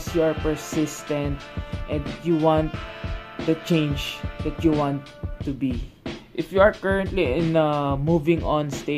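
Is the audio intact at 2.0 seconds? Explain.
Yes, at 2.0 seconds the audio is intact, with no dropout, click, distortion or other fault audible at that point.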